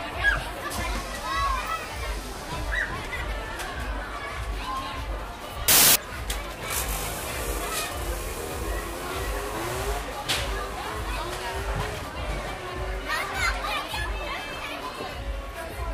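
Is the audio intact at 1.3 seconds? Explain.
Yes, the audio at 1.3 seconds plays through cleanly, with no dropout, click, distortion or other fault at that moment.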